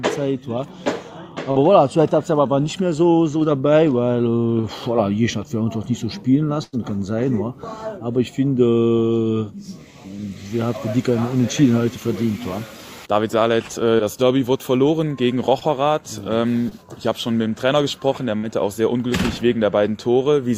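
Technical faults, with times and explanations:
1.51, 4.61, 13.97, 15.59 and 16.69 s: short concealed packet loss. About 20 ms of audio (40 ms at 1.51 s) arrived too late to decode. The receiver extended the preceding sound to fill each gap, leaving a brief smear or wobble.
6.63–6.75 s and 18.37–18.45 s: burst of packet loss. Consecutive packets were lost, about 100 ms and then 60 ms. The receiver stretched the last sound and faded it, so a held buzz or fading hiss replaces the missing audio.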